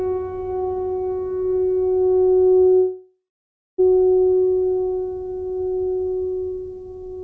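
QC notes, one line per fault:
2.76–3.80 s: call audio freeze. The music stops, its last sound stretched into a fading buzz and then 0.59 s of silence, before resuming where it left off. Likely packets were held up and drained the jitter buffer, so nothing is lost but everything after plays 1.02 s late.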